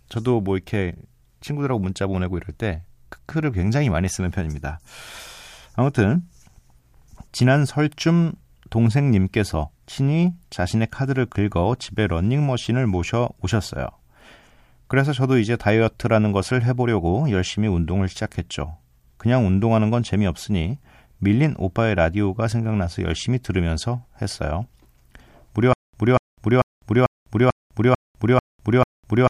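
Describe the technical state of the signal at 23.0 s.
Nothing at 23.0 s points to a fault: the signal there is intact, with no dropout, distortion or other audible defect.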